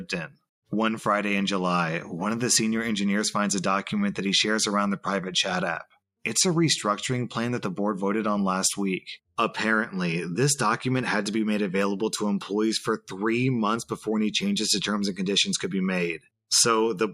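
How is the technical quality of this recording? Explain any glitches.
There is one glitch, right at the start. From 0.27 to 0.42 s, the sound is cut by the noise suppressor. The suppressor mistakes this sound for background noise and pulls it down, by about 18 dB at its deepest. For roughly 150 ms, the sound sinks.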